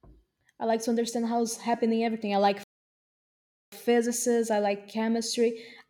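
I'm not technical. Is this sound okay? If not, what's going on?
No. There is a playback stall from 2.64 to 3.72 seconds, right after "happening everything I like". The speech simply stops and the clip goes silent for about 1.1 seconds before carrying on. The likely cause is that the player ran short of audio to play, or was briefly held up by something else on the device, so it had nothing to send to the speakers until it caught up again.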